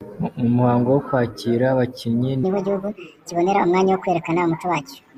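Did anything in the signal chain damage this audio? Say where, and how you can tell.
Yes. From 2.43 s, right after "muhango wo kwakira abakinnyi", to the end, the speech suddenly runs 1.5 times faster and sits about 7 semitones higher. This is a wrong sample rate fault at the playback stage: samples were clocked out faster than they were captured, with no conversion. The ratio fits 32 kHz material played at 48 kHz. Pace and pitch rise by exactly the same ratio, which rules out a pitch shifter or time-stretch, where one changes without the other.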